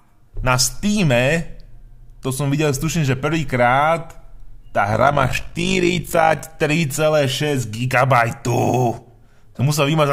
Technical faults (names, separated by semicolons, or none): overlap-add ripple